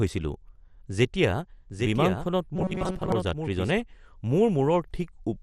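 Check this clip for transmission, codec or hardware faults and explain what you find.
Three faults are audible in this speech.

MP2 compression, throughout: nothing remains above 14.3 kHz, with dull, gurgling, granular distortion. Likely 32-band Layer II coding at a low rate near 64 kbps. The flickering bands set it apart from simple lowpass filtering.

Doubled audio track, 1.70 to 3.82 s: a full-band copy about 5 dB quieter trails by roughly 0.7 s, starting and stopping abruptly. Unlike reverb, it has no decay or room colour.

Robotic sound from repeated short buffers, 2.56 to 3.12 s: a rigid, metallic 188 Hz buzz follows the speech roughly, while most of the real audio is skipped. A roughly 5.3 ms buffer is likely being looped. The fixed pitch distinguishes it from codec gurgle.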